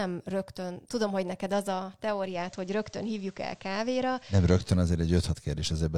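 Digital radio blending to analogue, 2.22 to 4.72 s: the receiver lost digital reception and cross-faded over 148 ms to the FM broadcast, adding hiss well below the signal and a level shift of about 1 dB, then returned.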